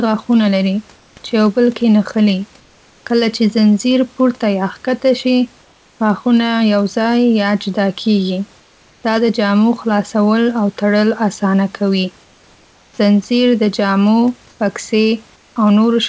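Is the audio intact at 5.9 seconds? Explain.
No. From 5.62 to 6.00 s the sender likely stopped transmitting during a pause in speech, and the receiver filled those 0.38 s with comfort noise in place of the background. The real room noise, sitting about 36 dB below the loudest speech, is replaced by a steady, featureless hiss about 3 dB quieter. It loses the texture of the surrounding background, so the pause sounds flat and slightly dipped until the audio resumes.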